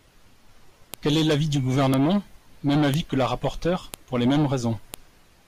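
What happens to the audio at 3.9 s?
At 3.94 s a new piece of the stream arrives with its WAV file header still attached, and the player treats those few dozen bytes of metadata as if they were samples. This is the file header played as audio fault, occurring where one piece, about 1 s long, gives way to the next. Because the header values bear no relation to the waveform, the speech is interrupted by a brief, sharp, loud click or snap.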